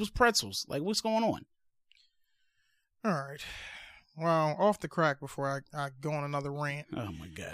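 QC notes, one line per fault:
No faults found in this recording.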